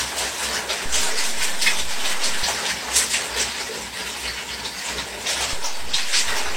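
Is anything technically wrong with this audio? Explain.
Yes. There are two DC steps. At 0.86 s the waveform's zero line suddenly shifts, then returns at 2.43 s. A second shift starts at 5.53 s and holds to the end. Each jump is heard as a low thump while the sound carries on unchanged.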